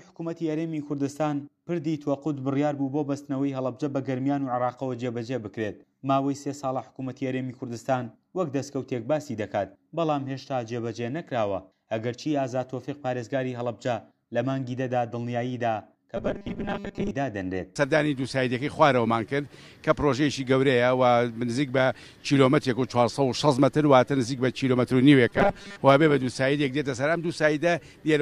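Robotic sound from repeated short buffers at 16.17–17.11 s and 25.28–25.82 s: a rigid 200 Hz buzz, likely 5 ms loops, visible as evenly stacked harmonic lines.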